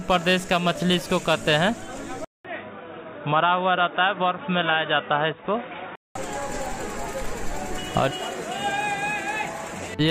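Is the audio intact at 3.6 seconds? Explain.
No. An input switched to a poorer device runs from 2.25 to 6.15 s, so 3.6 s falls inside it. The recording most likely changed to a lesser microphone or headset path partway through. After a 200 ms gap at the switch, the sound turns dull and boxy with nothing above 3.8 kHz, drops around 5 dB in level, and carries a faint new noise floor far beneath the signal until the original input returns.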